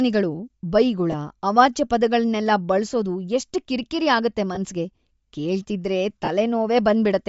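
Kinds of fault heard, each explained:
Bluetooth LC3 compression: The speech was likely squeezed through a low-bitrate transform codec that discarded much of the upper spectrum and filled it with noise, so the whole clip carries a plainly audible breathy, grainy edge, which fits LC3 at around 32 kbps.
Lost LE Audio frames: Frames dropped on the link, and the decoder patched each gap by repeating the last spectrum with scrambled phase. This leaves short noisy smears at 1.12 s and 4.55 s (20 ms each) and at 6.25 s (30 ms).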